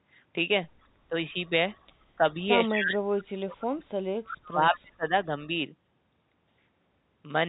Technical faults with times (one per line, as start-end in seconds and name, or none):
1.09-1.15 speech suppressed in double talk
1.74-1.86 echo leak
2.16-2.24 speech suppressed in double talk
2.63-3.92 speech suppressed in double talk
3.59-3.65 echo leak
4.26-4.37 echo leak
4.35-5.29 speech suppressed in double talk